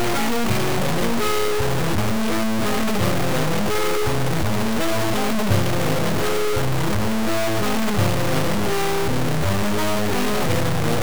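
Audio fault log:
throughout: low bit depth without dither. The audio is coarse and grainy from start to finish. The distortion sits at roughly the same level as the sound itself. The error moves with the signal rather than forming a separate hiss. Quiet passages break up or sputter between steps. The likely cause is a signal held to about 3 bits and truncated, not rounded, with no dither. So every sample snaps down to a few coarse levels.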